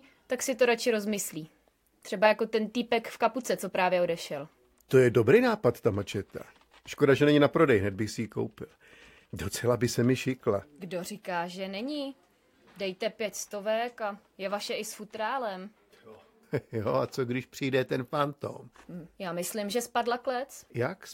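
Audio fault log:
Nothing stood out on listening.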